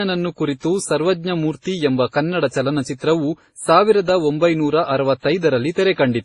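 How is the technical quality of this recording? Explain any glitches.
The quality is degraded for the whole clip by transcoding between lossy codecs. The speech was likely passed through a chain of lossy encoders, starting at a very low bitrate consistent with 24 kbit/s MP3, then re-encoded twice more, finishing in Opus. Each later encoder spent bits reproducing the earlier damage and then added its own. The stacked artefacts sound smeared and watery, with nothing above 11.7 kHz, so sibilants and the top of the voice sound dull.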